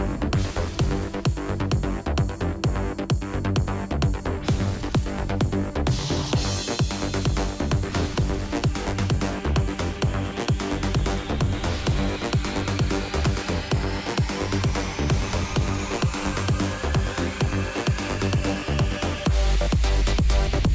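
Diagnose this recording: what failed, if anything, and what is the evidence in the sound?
Nothing failed here; there's no dropout, glitch or distortion anywhere in the recording to point to a broken stage in the chain.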